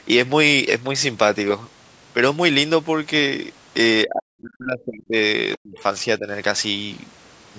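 From 4.07 to 5.16 s the speech drops away by a large amount and breaks up, then does so again from 5.57 to 5.82 s and, more mildly, from 6.19 to 6.28 s, most likely speech suppressed in double talk, with the echo canceller ducking the talker during overlap.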